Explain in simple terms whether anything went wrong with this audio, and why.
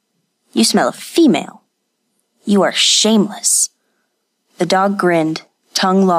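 Nothing went wrong with this speech recording that a listener can pick out. At no point does anything stand out as a technical problem.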